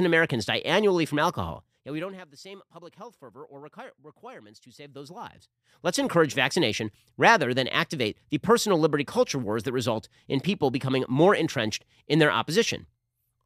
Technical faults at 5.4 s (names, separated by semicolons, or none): zipper noise